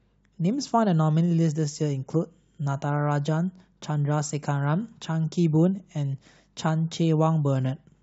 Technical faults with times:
none

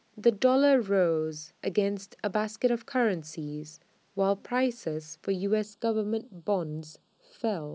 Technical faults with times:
5.64-7.74 channel delay (comb filtering)

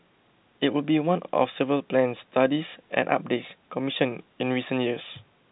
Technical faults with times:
none

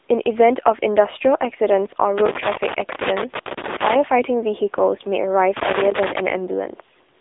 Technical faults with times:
0.00-7.21 AMR narrowband mobile codec
5.57-6.20 loose connector crackle

